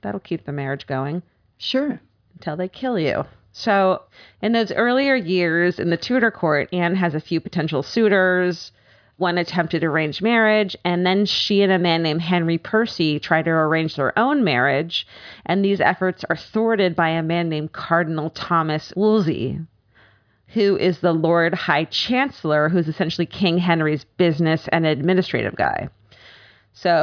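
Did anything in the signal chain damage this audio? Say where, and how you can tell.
No, none of the stages between capture and playback left any audible damage on this speech recording.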